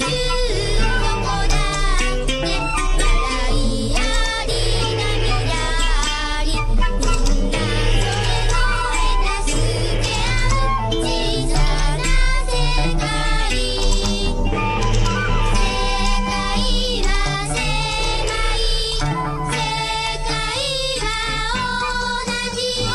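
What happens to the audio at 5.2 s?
Nothing goes wrong at 5.2 s; the audio plays through that moment intact, with no dropout, click, glitch or other fault.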